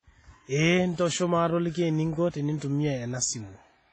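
Throughout the speech, the sound rings and washes, with hiss breathing alongside each syllable and nothing above 10.6 kHz. This is likely WMA compression at heavy damage, fitting a bitrate near 24 kbps. A spectrogram shows a flat ceiling, patchy missing weak bands, and smeared onsets.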